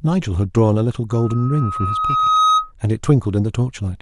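From 1.10 to 2.72 s a loudspeaker feedback squeal rises at 1.3 kHz: the microphone re-amplifies its own loudspeaker until that frequency runs away. Unlike a steady interfering tone, it swells over roughly a second and a half, ending a few decibels above the speech.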